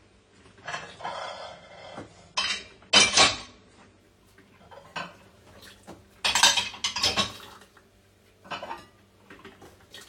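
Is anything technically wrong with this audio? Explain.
Yes. From 0 to 4.0 s, this everyday sound shows an adaptive stream starting at a low bitrate. Nothing is present above about 9.7 kHz, and codec artefacts are heavier. That points to a low-rate version near 24 kbit/s. At 4.0 s the quality jumps, without a gap, to a fuller version.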